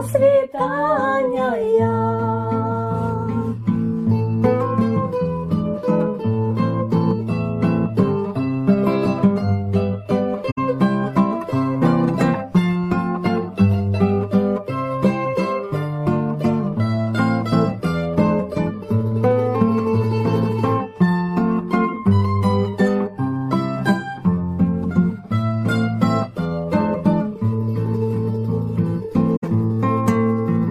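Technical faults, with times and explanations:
10.51–10.58 s and 29.36–29.43 s, corrupt frame concealed: each is a brief span of about 80 ms. Damaged bits in the AAC stream were caught by the decoder, which patched over the span, which fits about three lost frames.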